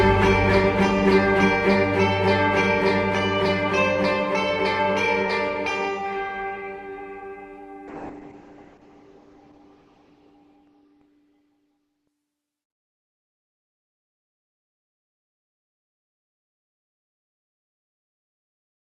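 From 7.89 to 12.63 s the audio turns rough and muffled, losing everything above about 6 kHz, worst for 2.4 s: a call bitrate drop, consistent with roughly 32 falling to 7 kbps.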